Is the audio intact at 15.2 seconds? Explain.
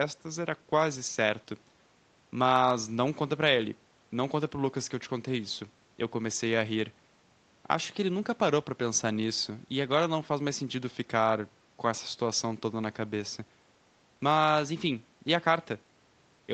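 Yes, at 15.2 seconds the speech is intact, with no dropout, click or distortion at that moment.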